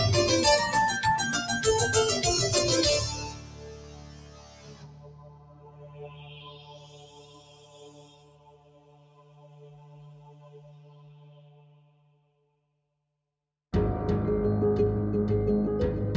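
From start to finish there's a noise suppressor applied to music or sounds, a speech-oriented one left running on material it wasn't built for. It's treating the sustained parts and the ambience as noise, so the attacks come through while held tones and decaying tails get pulled down, swinging by something like 20 dB. You hear it as pumping and fluttering, with the sound thinning out between hits. The call-style mic chain underneath tops out at 8 kHz, which is expected.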